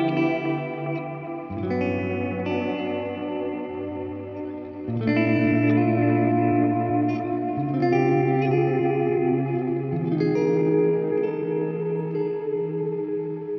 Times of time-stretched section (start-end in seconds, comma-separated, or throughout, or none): 2.99-13.58